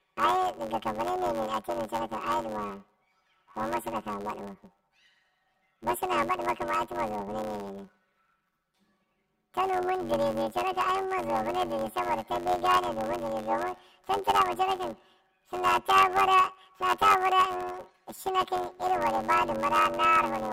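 A speech clip suffering from planar audio read as interleaved, for its whole length. The stereo stream arrives with each block storing all left samples followed by all right samples, but the reader treats it as alternating left-right pairs, so each block replays as a double-speed left half then a double-speed right half. The blocks are short, about 10.67 ms, which fits a 512-sample block. Instead of an octave jump, the speech therefore takes on a robotic buzz at the block rate of about 93.8 Hz.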